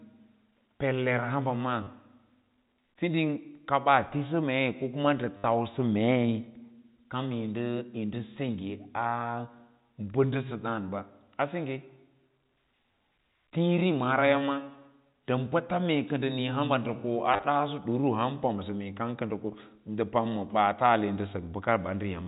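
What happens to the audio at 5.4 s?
Packet loss with last packet repeated from 5.37 to 5.44 s: about 70 ms of lost audio is filled by looping the last packet, producing a robotic buzz. On a waveform it shows as identical repeating blocks; on a spectrogram, vertical click lines spaced roughly 10 ms apart.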